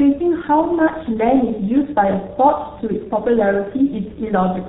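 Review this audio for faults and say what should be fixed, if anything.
The speech passed through the G.723.1 codec for its whole length, at a rate that fits its 6.3 kbit/s mode, leaving heavy damage: nothing above 4 kHz, muffled, hoarse tone, smeared consonants. To prevent it, negotiate a wideband or higher-bitrate codec such as G.722 or Opus instead of G.723.1.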